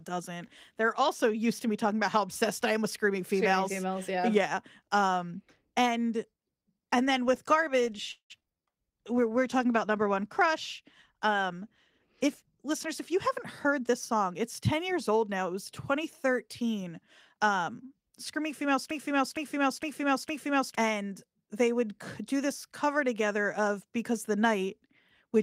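From 8.11 to 8.50 s there is repeated packet loss with a robotic sound. Four gaps follow in quick succession, the longest 185 ms. The receiver patches about 204 ms by extending the previous sound and leaves 60 ms missing. Just over half the stretch is concealed, so it comes out choppy with pieces missing.

A jitter buffer slow-down follows immediately, from 8.50 to 8.73 s. To build up a reserve, the receiver repeats short pitch periods to add 42 ms. Playback drops to 85% speed at unchanged pitch, so the sound drags briefly.

A call bitrate drop runs from 9.02 to 13.25 s. The bandwidth estimate falls and the encoder goes from 32 to 16 kbps for the full 4.2 s. The coarser coding makes the audio rougher and watery, with less high-frequency detail, until the rate recovers.

From 12.26 to 15.11 s, overlapping the end of the low-bitrate stretch, a jitter buffer speed-up trims excess buffered audio. 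It cuts about a fifth of a second in small pieces of a pitch period or so. Playback runs at 106% speed without a pitch change, sounding slightly hurried.

From 18.91 to 20.75 s a broken-record loop repeats a 0.46 s fragment exactly, four times back to back. The cause is likely a stalled stream or player resending the last fragment it held. The audio that should have played during that time is lost.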